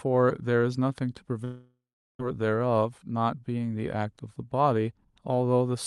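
From 1.44 s to 2.20 s the speech stops and is replaced by a continuation of the last sound: a buzzy tail that decays over the first few tenths of a second, leaving about 0.38 s of silence before speech resumes with roughly 0.75 s of material simply gone. This is most likely a long network dropout, where the receiver conceals missing packets until it gives up and mutes. The Opus call path's top end stops near 12 kHz.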